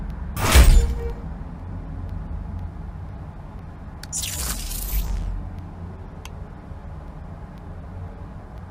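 Evenly spaced ticks recur every 0.5 s from 0.10 s to 8.58 s, heard only where sound is present. These are periodic USB or driver dropouts: at a fixed interval the audio path stalls, and a tiny fraction of a millisecond of signal is replaced with silence each time.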